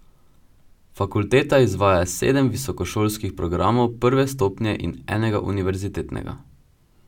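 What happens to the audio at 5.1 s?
Nothing goes wrong at 5.1 s; the speech carries on intact through that moment with no dropout, click or distortion.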